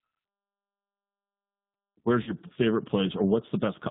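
Throughout, the speech is squeezed into about 150 Hz to 3.7 kHz and sounds rough and synthetic, the G.729 codec rebuilding it from a few pulses per frame, unlike plain band-limiting. From 2.23 to 2.34 s, VoIP packet loss concealed by the speech codec stretches roughly 40 ms of missing audio, likely two lost packets, into a fading buzzy tone or coloured noise. The sound stays weak until 2.34 s rather than falling silent or clicking, as a plain dropout would.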